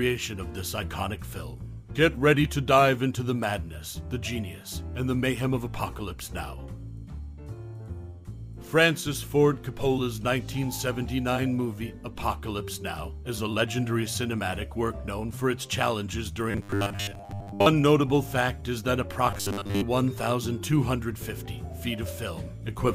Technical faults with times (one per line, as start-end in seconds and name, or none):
16.51-17.66 robotic sound from repeated short buffers
19.31-19.83 robotic sound from repeated short buffers